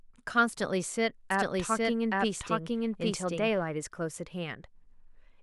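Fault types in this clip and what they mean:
Doubled audio track: from 1.31 s to 3.63 s the speech is heard twice, with a second full-band copy trailing the first by roughly 0.7 s at about the same level. The copy carries no decay or added room colour, so it reads as a clean duplicate rather than an echo, and it cuts in and out abruptly at those times. The likely cause is the same signal captured again through a slower path, or two misaligned copies left in an edit.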